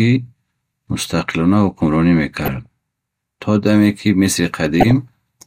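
Sample clock jitter runs through the whole speech clip. The converter's timing wanders by about 0.7 microseconds, so each sample lands slightly off its proper instant. The resulting error sits roughly 45 dB below the speech, a faint grainy hiss that thickens on loud, bright sounds and disappears in pauses.

DAB burbling occurs from 2.37 to 2.66 s, just after "мустақилона ҳукумронӣ", and again from 4.81 to 4.91 s. Bit errors of a fraction of a percent slipped through error correction into the MP2 data, corrupting samples so that short blips of noise appear in individual sub-bands. The result is short noise blips over the speech.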